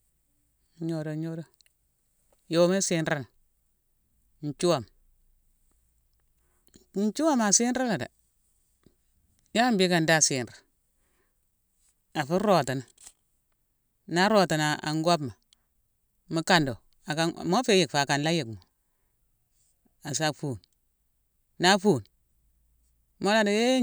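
No technical faults are audible.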